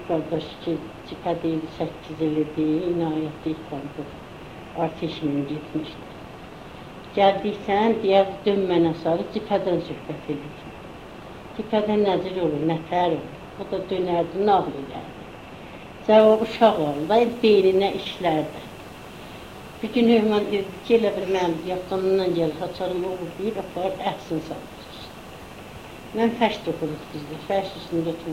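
From the start until about 16.2 s, there's de-emphasis applied wrongly: a treble cut got added where no pre-emphasis existed to undo, or was applied a second time. The top slopes off smoothly, about 8 dB down at 10 kHz relative to 1 kHz, so everything sounds dull and muffled.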